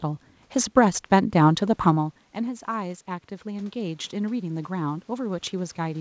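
Around a second and a half in, the talker moves back and the level at the mic drops by about 14 dB. From 1.6 s to the end, you can hear the automatic gain rising as the AGC slowly pushes its gain up to compensate. The speech and the room noise swell together over several seconds, so the background noise climbs right along with the voice. All of it sits inside a G.722 call band that stops at 8 kHz.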